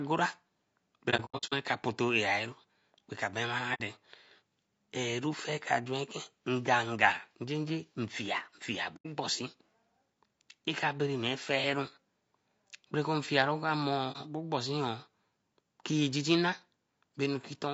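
Low-delay AAC compression runs through the whole speech clip. The voice sounds rough and grainy, with noise filling the gaps between harmonics and a thin, somewhat synthetic top band. The likely cause is AAC-ELD coding at a low rate, fitting around 32 kbps. At that rate the bits run out, so the damage stays plainly audible.

AAC frame loss with muting first appears between 1.10 and 1.53 s, where about 270 ms of sound is missing in gaps scattered across 420 ms. The longest run of silence lasts about a tenth of a second. Shorter holes follow at 3.74 to 3.81 s (60 ms), 8.96 to 9.06 s (90 ms) and 14.12 to 14.16 s (30 ms). The decoder zeroed the spectrum of each lost frame, and the overlapping windows fade the sound out and back in, so each gap is a soft-edged dropout.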